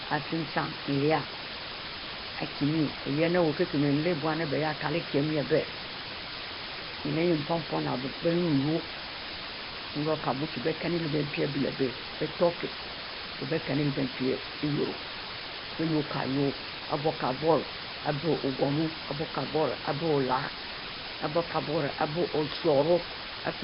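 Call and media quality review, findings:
Low bit depth with dither, throughout the clip: constant, even hiss at about 5 dB below the speech, no distortion. Signal sits at around 4 bits; dither before rounding turns the quantisation error into steady white noise.

Nellymoser compression, throughout the clip: heavy damage, with a rough, hissy halo around the speech, a smeared underwater quality, and nothing above 5.3 kHz. Likely cause: Nellymoser Asao near 22 kbps, coding short fixed blocks and filling unfunded weak bands with noise.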